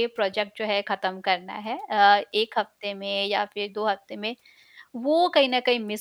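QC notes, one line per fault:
Nothing to flag here; the speech comes through without any technical problems worth noting.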